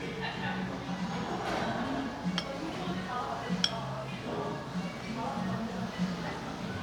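No technical faults can be heard anywhere in this recording of sounds. Nothing in it calls for a timestamp or a note on how the audio was captured or carried.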